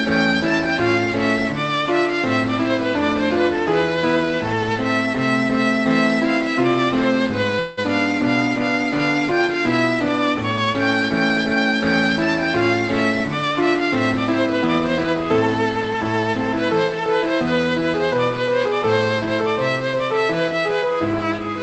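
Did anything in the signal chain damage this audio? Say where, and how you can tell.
Yes. At 7.59 to 7.79 s, in the network and jitter-buffer stage, there is a call audio freeze, likely from packets held up in transit. The last sound is stretched into a fading buzz or hiss for about 0.18 s, then the audio resumes where it left off. Unlike a packet-loss dropout, nothing is skipped; everything afterwards simply arrives later.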